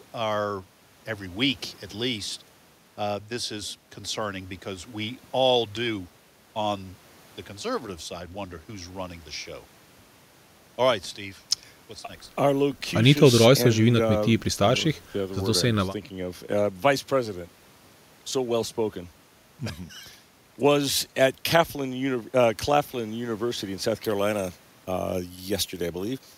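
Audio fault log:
24.05–26.38 s, pre-emphasis left on: right at the end the speech suddenly turns thin, bright and hissy, with the s and t sounds jumping forward. The treble boost applied before recording or transmission never got its matching cut, so the top end sits about 14 dB hot at 10 kHz relative to 1 kHz. The tilt fits a standard FM 75 µs curve, which is why it sounds so sharp and sibilant.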